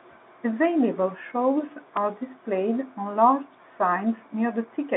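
A repeated buffer at 1.97 s, just before "displayed on large", puts a brief click into this speech clip: fresh audio arrived late, so the same 2.9 ms block, which fits a 128-sample buffer, played twice with a hard join, over the narrow telephone band of G.711 coding.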